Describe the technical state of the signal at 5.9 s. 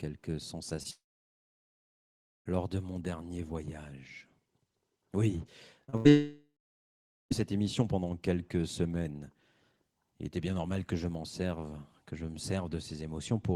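Around 5.9 s, audio packets failed to reach the decoder in time, causing short concealed packet loss twice in a row: 5.84 to 5.90 s, with about 40 ms patched, and 5.90 to 5.95 s, with about 30 ms patched. The receiver extended the preceding sound over each hole and then blended back into the real signal, which leaves a brief smear or wobble.

Right after, from 5.97 to 6.07 s, a burst of packet loss removed about 80 ms. The decoder continued the last sound while fading it down across the gap, producing a held buzz or dying hiss, and the audio resumes with that stretch missing.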